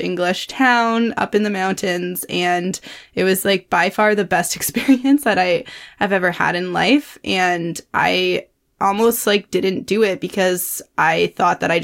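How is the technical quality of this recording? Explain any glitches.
No glitches or technical faults are audible anywhere in the speech recording.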